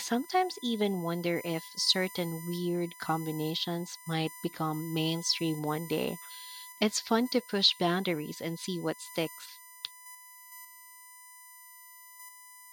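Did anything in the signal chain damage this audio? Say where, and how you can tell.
Yes. USB whine runs through the whole speech clip: a steady tone fixed at 1 kHz sits under the speech, roughly 20 dB below it, and its pitch never drifts. That exact frequency points to the analogue wiring stage, through a shared power or ground path. The USB bus draws current in bursts once per 1 ms frame. That repeating load puts a ripple on the supply or ground, and the ripple leaks into the audio path as a 1 kHz whine.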